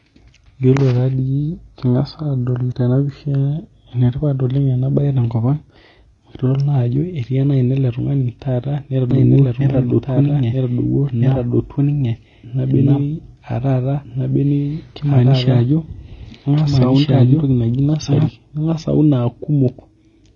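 From the start, the speech carries AAC compression damage that is plainly audible. Nothing remains above 8.2 kHz, and the band-limited, smeared texture with fizzy sibilants fits AAC-LC coding at a low bitrate, likely near 24 kbps, discarding high frequencies to save bits.

From 9.11 to 18.27 s a doubled audio track runs under the speech. A full-band copy at roughly equal level trails by about one and a half seconds, with no decay or room colour. It likely comes from a second, slower capture path, and it starts and stops abruptly.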